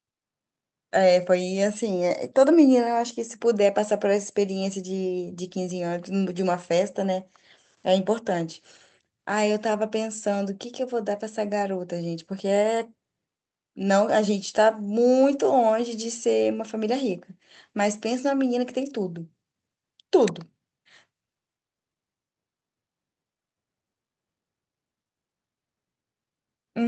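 Nothing here goes wrong at any point; the speech simply comes through the call's codec and jitter buffer as you'd expect, with its top end rolled off around 8 kHz in the usual way for that kind of link.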